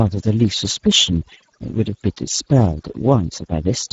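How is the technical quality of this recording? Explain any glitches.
The technical quality is poor. Two faults run through the whole recording.

Overdone noise removal, present throughout: a noise reducer set too aggressively shuts off individual frequency bands whenever they sit near its noise estimate, taking quiet speech detail with them. Pauses drop to near silence with twinkling specks. A spectrogram shows isolated flickering dots in the gaps and patchy, holed speech energy.

Speex codec, present throughout: this low-bitrate CELP speech codec has few bits for the excitation signal, so the damage is plainly audible as a noisy, hoarse edge on the speech, which fits a setting near 10 kbps. Nothing remains above 7.7 kHz. A spectrogram shows a hard ceiling there and smeared, grainy harmonics beneath it.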